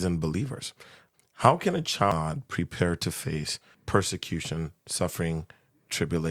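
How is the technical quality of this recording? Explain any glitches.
The recording has one glitch, at about 2.12 s. It is damaged data in a compressed stream. At that point some of the encoded bytes were corrupted or lost, so the decoder could not read the frame. It lost its place in the stream and had to hunt for the next valid frame header before decoding resumed. In the speech this is heard as a brief chirp, squawk, click or short hole where the decoded audio breaks.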